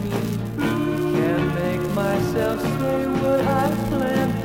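No technical faults can be heard in the sound, so there is nothing to describe in time order.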